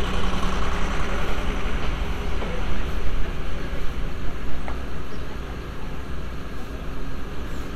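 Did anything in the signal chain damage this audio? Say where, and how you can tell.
No, nothing in the signal chain has damaged this audio; the sound reaches the listener intact, with no audible trace of trouble at any stage from capture to playback.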